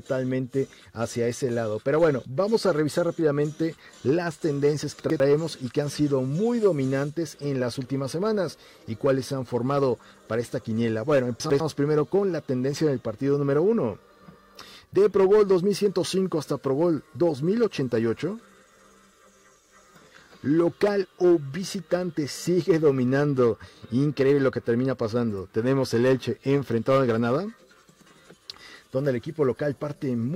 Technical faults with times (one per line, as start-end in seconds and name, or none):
5.00-5.20 chunks out of order
11.40-11.60 chunks out of order